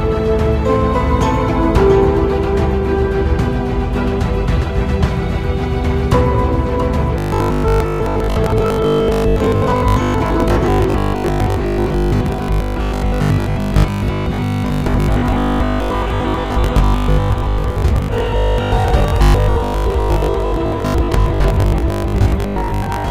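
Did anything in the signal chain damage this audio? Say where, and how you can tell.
Yes. Robotic sound from repeated short buffers runs from 7.18 s to the end at 23.10 s: a rigid 50 Hz metallic buzz. This is likely a driver or buffer underrun that loops the last 20 ms of audio for most of the stretch, skipping the real signal.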